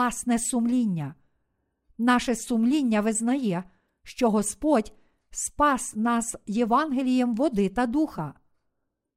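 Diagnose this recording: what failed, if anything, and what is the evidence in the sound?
Nothing failed in this speech recording: at every stage from capture to playback, the signal stays continuous and intact, with no audible defect anywhere in it.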